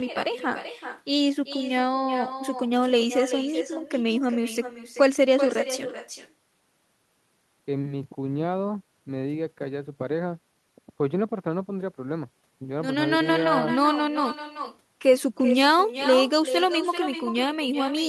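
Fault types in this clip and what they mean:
Echo with no canceller, throughout: every phrase is trailed by a second, weaker copy of itself roughly 400 ms later, sitting about 10 dB below the direct sound and sounding thinner. The far end is playing the call over a loudspeaker, its microphone picks that playback up, and nothing on that side subtracts it, so the sound travels back across the network and lands a round-trip later.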